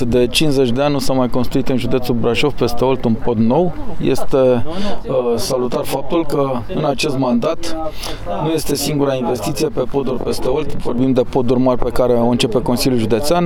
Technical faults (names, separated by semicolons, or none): channel delay (comb filtering)